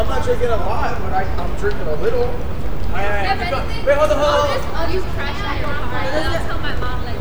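No technical faults can be heard in this recording of everyday sounds.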